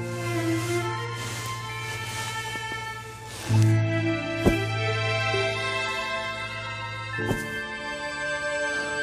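No technical faults are audible.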